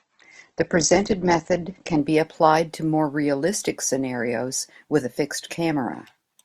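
From 0.0 to 2.0 s, an adaptive stream starting at a low bitrate leaves nothing above 8.2 kHz; the spectrogram's treble then fills in abruptly.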